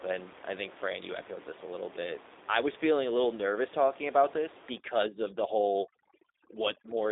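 A low-rate speech codec sits in the path for the whole clip, and its character points to G.729 at about 8 kbit/s. Rather than carrying the waveform, it sends a vocal tract filter, a pitch predictor and a handful of pulses per frame, and the decoder rebuilds the speech from those. The speech is confined to a telephone band of roughly 300 Hz to 3.7 kHz, with nothing above 3.8 kHz, and the codec damage is plainly audible as a rough, slightly synthetic edge.

From 4.78 s to the end, at 7.11 s, overdone noise removal takes hold. A suppressor set far too aggressively drives individual frequency bands down or off whenever they come close to its noise estimate, and the quieter parts of the speech are removed along with the background. The room noise, which sits about 17 dB below the speech before this point, collapses toward silence dotted with twinkling specks.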